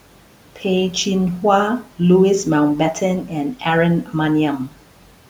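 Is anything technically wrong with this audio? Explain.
Yes. From 4.04 to 4.14 s, about a tenth of a second, there is speech cut by the noise suppressor: it misjudged part of the speech as noise and pulled it down by up to about 9 dB, so that stretch sounds swallowed and faint. On a waveform the envelope dips there, and a spectrogram shows the speech energy thinning toward the level of the room noise, which otherwise sits about 23 dB below the speech.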